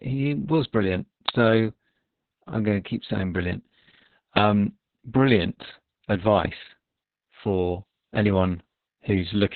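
Speech, with Opus voice compression throughout. Nothing is present above about 4.4 kHz, so the sound is narrowband, muffled and hoarse, with a slightly robotic edge. The heavy damage points to the SILK coder at a very low rate, around 6 kbps with long 60 ms frames. At 1.29 s, right after "he was brilliant", there is an uninitialised buffer fault. A very short, loud crack appears where stale memory was played as audio. Its length fits a 64-sample block.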